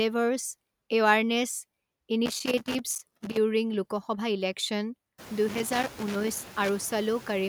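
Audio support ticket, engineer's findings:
Noise suppressor artifacts throughout. Background pulled down about 15 dB, gating frame by frame. Residue sinks between phrases, swells under speech. Worse after room noise rises about 24 dB around 5 s, to about 18 dB below speech. Suspect suppressor stage.

Loose connector crackle at 2.26–3.37 s and 5.48–6.69 s. Irregular scratchy bursts, signal chopping. Probable cause: worn or dirty contact making and breaking under movement. Check mic cable and jack.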